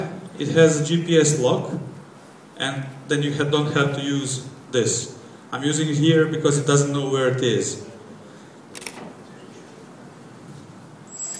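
No technical faults are audible anywhere in the clip.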